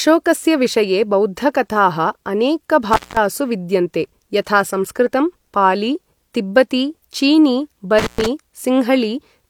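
Speech cut out twice by intermittent contact, at 2.93–3.17 s and 7.99–8.26 s, the line opening for about 190 and 120 ms. Crackle at the edges distinguishes it from a clean digital dropout.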